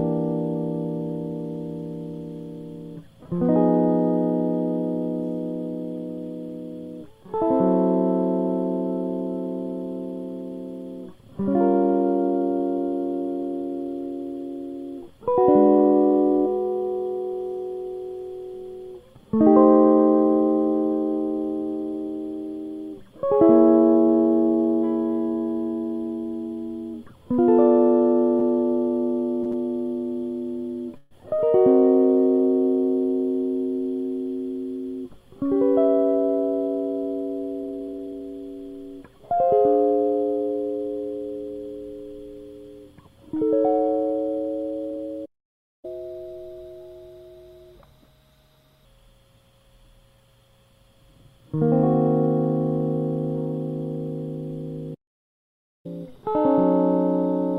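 Music with several delivery faults from just before the middle onward. At 28.39 s, 29.43 s and 29.52 s there are three short stalls from a late packet. Each time a packet misses its deadline, the jitter buffer runs dry, and the receiver stretches the last bit of sound for 17 ms, 26 ms and 17 ms respectively before resuming from the same point. Nothing is lost, but each stretch adds to the playback delay, and the held sound carries a slight buzz or dip. From 30.97 to 31.14 s comes a call audio freeze. The last sound is continued for about 135 ms as a fading buzz or hiss and never drops to full silence, then the music resumes where it stopped with no content missing. This longer hold likely comes from packets held up in transit, and it pushes the delay back by those same 135 ms. At 45.25 s a playback stall cuts the music off in mid-flow for about 0.58 s until 45.85 s. A second, longer one runs from 54.94 to 55.86 s, about 0.9 s of dead output. 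Both likely come from the player running out of data or its output thread being blocked. Each stall is followed by catch-up at higher speed as the player resamples its backlog to recover lost time. From 45.85 to 48.85 s the music runs at 1.15 times speed, with pitch up about two semitones, before settling back. After the second stall, from 55.86 s to the end, it runs at 1.1 times speed, sharp by about one and a half semitones.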